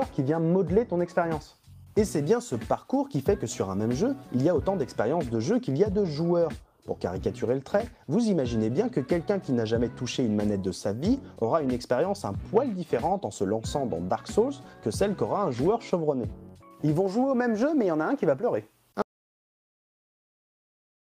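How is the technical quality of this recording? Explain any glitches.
One fault: an audio dropout to silence from 19.02 s to the end. The input feed was likely cut, through a failed link or a disconnected device, while the recorder kept writing silence. The sound stops abruptly mid-flow into silence, with no room tone remaining.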